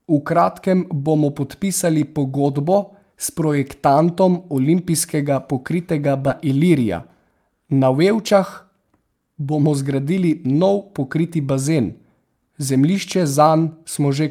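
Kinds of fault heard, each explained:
Skip ahead: At 6.27 s playback jumps straight forward with no pause and nothing filled in. Roughly 0.4 s of speech was discarded while later audio was already queued, so the two sides are spliced almost directly and the listening delay shrinks by about that much. On a spectrogram this is a sharp vertical seam where harmonics and formant bands change position instantly. The waveform shows an abrupt envelope change with no silent stretch between.
Jitter buffer speed-up: From 8.22 to 9.43 s the speech runs at about 110% speed while its pitch stays unchanged, so it sounds hurried. The buffer was holding more audio than its target and trimmed the excess, roughly 150 ms in total, by cutting out many short pieces of one or a few pitch periods in quick succession. A spectrogram shows harmonics at their normal spacing but syllables squeezed closer together in time. 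The waveform looks continuous, with no gaps, and the syllables are visibly shortened.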